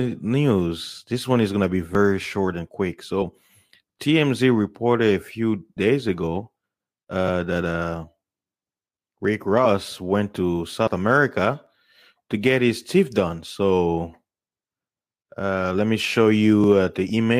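At 1.95 s audio is missing between chunks: the recorder, likely working in 2.5 s chunks, loses roughly 15 ms while closing one chunk and opening the next, and the two edges are joined with no gap, so the speech skips abruptly. At 3.21 s compressed frames are skipped: a short run of frames never reaches the output, so the speech jumps ahead by about 50 ms. The chunk-boundary skip returns at 4.39 s. Frames drop again at 5.76 s, losing about 70 ms, and at 7.27 s, losing about 50 ms. Another chunk-boundary skip comes at 9.25 s, followed by a frame skip at 9.64 s of about 20 ms and another at 10.86 s of about 50 ms. Chunk-boundary skips then continue at 11.67, 14.15 and 16.64 s, spaced close to the 2.5 s chunk length. The last frame skip, at 17.09 s, removes only a few milliseconds.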